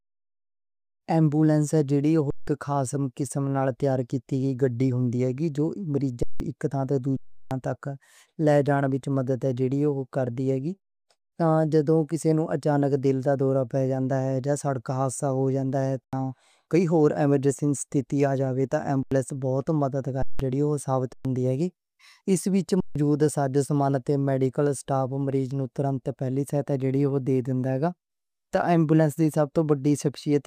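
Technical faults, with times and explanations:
2.30–2.48, 6.23–6.40, 7.17–7.51, 16.04–16.13, 19.03–19.12, 20.22–20.40, 21.13–21.25, 22.80–22.96 s: underrun with held sample. Each time the output froze on a flat level, so the sound cuts out silently rather than clicking like a dropout to zero. The gaps last about 85–340 ms, most of which fit whole 4096-sample buffers. Roughly 100–300 ms of speech is skipped.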